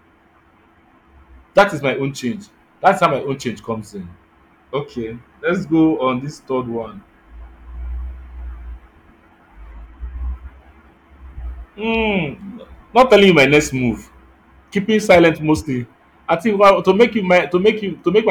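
Speech with hard clipping at 2.86–3.06 s, between "is my own change" and "my own change comes"; at 12.98–13.58 s; at 15.11–15.29 s, just before "mostly I"; and at 16.33–17.69 s, just after it. Peaks overran a stage's limit by about 4 to 7 dB and were cut flat, giving abrupt crackling fuzz rather than the rounded thickening of soft saturation.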